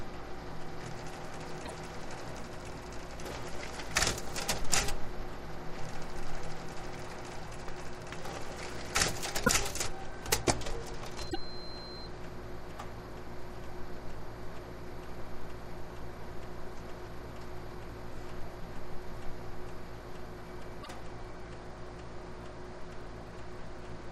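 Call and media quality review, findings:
Short corrupted bursts with a skip forward at 1.65–1.71 s, 9.45–9.49 s, 11.29–11.36 s, 20.82–20.88 s. Each spans two to three 24 ms frames. Likely broken MP3 bit reservoir: frames dropped upstream, so following frames decode borrowed bits from the wrong frame.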